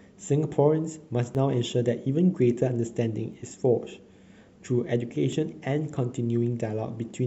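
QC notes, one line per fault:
1.35 s, 3.33 s and 5.32 s: overlap between stream segments. Successive segments carry time stamps that overlap at each joint, and the player trims the overlapping stretch as though it were duplicated, although that audio was never doubled. A few milliseconds of real speech are discarded and the waveform jumps across the gap, giving a brief click or tiny skip. The events recur about every 2 s, which fits segments of that length.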